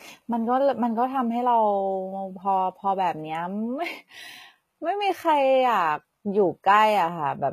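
Speech marred throughout by plainly audible HE-AAC compression artefacts: gritty, metallic sibilants, likely from a very low bitrate near 20 kbps. A spectrogram would show copied, mismatched upper-band patterns.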